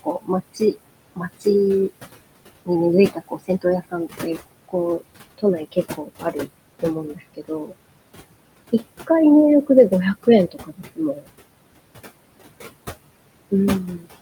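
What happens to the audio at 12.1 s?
At 12.1 s the speech is running through noise suppressor artifacts, which are present for the whole clip rather than starting there. The suppressor estimates the steady room noise in each frequency band and pulls those bands down frame by frame, by about 20 dB here. The room noise, about 14 dB below the speech, drops away in gaps and swells back under the speech.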